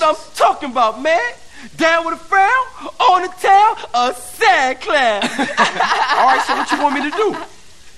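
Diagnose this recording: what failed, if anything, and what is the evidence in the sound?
Nothing stood out on listening that would point to a failure at any stage of the chain.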